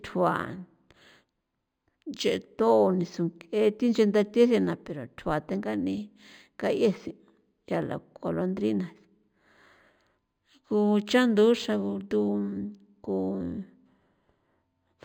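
Throughout the speech there is imaging from linear upsampling. Straight-line interpolation fits raising roughly 11 kHz material to 48 kHz. The top end is dulled, and mirrored images between 5.5 and 11 kHz, around 30 dB down, add faint metallic shimmer to sibilants.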